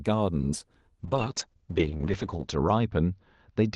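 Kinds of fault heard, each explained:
call bitrate drop: From 1.01 s to the end the encoder is starved of bits, so the sound turns coarse and watery and the top end dulls, which fits Opus sliding from 32 to 8 kbps and narrowing from 12 kHz to 8 kHz. It sits at its worst for 1.53 s.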